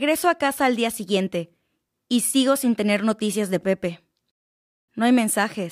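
Nothing faulty registers anywhere in the speech; no dropouts, glitches, level jumps or timing disturbances to report.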